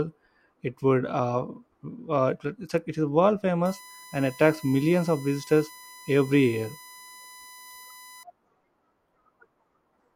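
After "it is world", from 3.65 to 8.23 s, USB whine sets in. Bus current drawn in 1 ms frames leaks through. A steady 1 kHz tone results.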